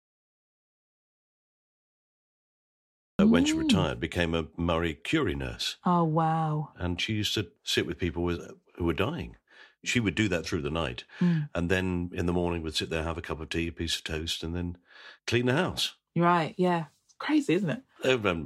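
From the very start to 3.19 s the clip is an audio dropout to silence: plain silence with no room tone at all, until the speech cuts in abruptly at "mm when she hmm". The input was likely lost or muted while recording continued.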